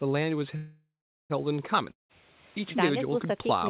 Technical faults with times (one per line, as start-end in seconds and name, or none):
0.56-1.32 call audio freeze
1.92-2.11 long network dropout